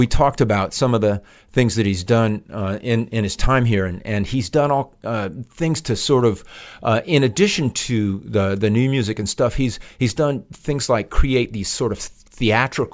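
No technical faults can be heard anywhere in the speech recording; the signal stays steady and intact throughout.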